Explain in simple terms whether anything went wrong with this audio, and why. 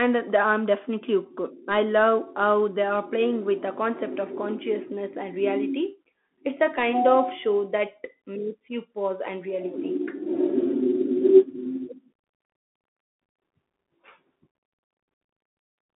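The whole recording, start to finish, went through a Bluetooth CVSD headset codec. This old headset link keeps only a narrow band of speech, roughly 200 Hz to 3.4 kHz, with nothing above 3.8 kHz, so the voice sounds thin and boxy. The damage is plainly audible: s sounds turn scratchy and a grainy hiss sits under the speech. That grit is what sets it apart from simple phone-line muffling, which dulls the sound without adding roughness.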